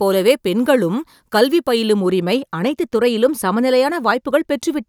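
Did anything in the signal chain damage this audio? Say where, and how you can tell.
Yes. Pre-emphasis was left on from 0.0 to 2.0 s, at the converter or playback stage where de-emphasis should be applied. The speech in that stretch is thin, bright and sibilant, with treble lifted by about 8 dB at 10 kHz relative to 1 kHz, which fits the CD 50/15 µs curve. The high-frequency boost added before storage was never undone by the matching cut, so the tilt stays in the signal until 2.0 s.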